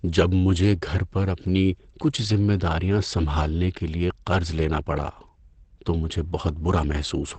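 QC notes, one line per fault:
throughout: Opus compression. The speech sounds plainly muffled and hoarse, with nothing above 8.6 kHz. The cause is likely Opus in its SILK speech mode, wideband, which fits about 16 kbps. That mode codes speech coarsely and cuts off the top band.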